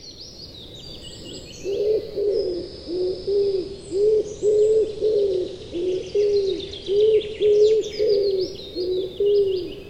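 From 2.19 to 7.84 s, digital radio blending to analogue: a 113 ms cross-fade to FM adds faint hiss.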